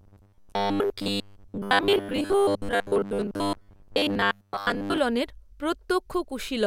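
From about 0.01 s to 4.98 s the speech takes on a robotic sound from repeated short buffers: a rigid, metallic buzz near 100 Hz, so each repeat is 10 ms long. Most of that stretch seems to be repeats rather than fresh audio, likely because new audio was arriving too seldom.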